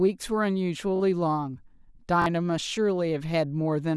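Repeated buffer at 0.96 to 1.00 s and again at 2.22 to 2.26 s in this speech clip. Each time, fresh audio failed to reach the output in time, so the device replayed its last chunk of about 21 ms, which fits a 512-sample buffer. That chunk sounds three times in a row, joined by hard edges, giving a brief buzzy stutter. Roughly 40 ms of the real speech is skipped at each point.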